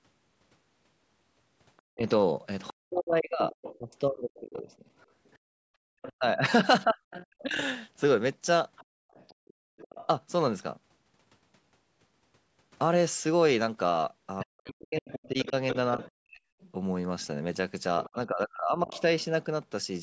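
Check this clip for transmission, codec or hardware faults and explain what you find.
The echo canceller on the talker's end is at fault in three ways; the speech is band-limited to 8 kHz by normal call microphone processing.

The other side's voice is leaking through from 1.77 to 10.07 s and from 14.4 to 19.02 s, likely because loudspeaker echo went uncancelled, leaving a second voice roughly 20 dB, then 15 dB, below the speech.

Speech is suppressed in double talk from 1.95 to 7.59 s, 14.44 to 16.42 s and 18.14 to 18.92 s, likely because the canceller ducked both sides at once, cutting the talker's voice by up to about 40 dB in pieces.

The background is gated by the echo canceller from 5.61 to 5.9 s: the canceller clamped the microphone, so the room sound drops by about 34 dB before returning.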